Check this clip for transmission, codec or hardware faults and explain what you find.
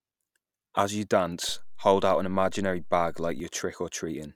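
There's one hardware-type fault here, a DC step in the speech. At 1.49 s the waveform's zero line suddenly shifts by about -35 dBFS and stays there until 3.40 s, when it drops back. That kind of jump comes from a converter recalibrating or an offset input being switched in partway through. You hear it as a low thump at each edge, once going in and once coming out, while the speech carries on unaffected.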